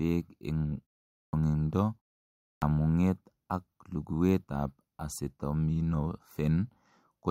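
At 1.23 s and again at 2.52 s, speech resumes with a clipped start after a pause of 0.44 s and 0.59 s. The output device sleeps during the silence and needs about 100 ms to wake. That first 100 ms is swallowed, so each phrase begins abruptly without its opening sounds.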